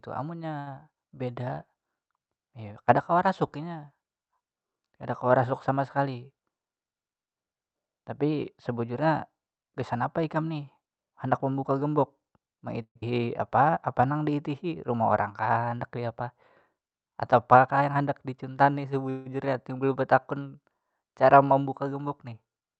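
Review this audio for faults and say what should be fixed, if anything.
At 0.59 to 0.68 s there is a short stall from a late packet. The last sound is held for 70 ms while the jitter buffer sits empty, then the speech resumes exactly where it left off with nothing lost. Unlike a dropout, there is no skip, just a brief drawn-out buzz. A slightly deeper jitter buffer target would absorb this.

Jitter buffer speed-up occurs three times: 5.98 to 6.50 s at 111% speed (about 70 ms trimmed), 15.30 to 15.97 s at 105% (about 40 ms), and 17.54 to 18.53 s at 107% (about 70 ms). The receiver cuts out pitch periods to shed excess delay, so the speech sounds hurried while the pitch stays the same, which is what separates it from a simple resample. Gentler, slower delay adaptation would prevent it.

At 12.82 to 13.04 s a long network dropout, likely the cause, produces a fading 202 ms buzz ending in 80 ms of silence. 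When the audio returns, 80 ms of speech is gone. That missing material distinguishes it from a freeze. Better network redundancy, such as forward error correction, would prevent it.

Jitter buffer slow-down follows from 13.18 to 14.19 s, running at 95% speed with 63 ms added by repeating pitch periods. The sounds are stretched at an unchanged pitch, unlike a single held stall. Keeping a steadier buffer target would avoid it.

From 19.10 to 19.28 s there is a call audio freeze, likely from packets held up in transit. The audio fades into a 159 ms filled gap and then resumes from the same point with nothing missing, unlike the dropout. More tolerant buffering for delay spikes would prevent it.

Through the Opus path, the 8 kHz bandwidth limit can be heard as softened highs.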